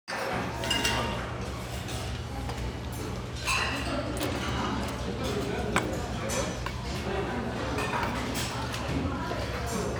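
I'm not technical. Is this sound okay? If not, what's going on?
Yes, I can't hear anything wrong with it.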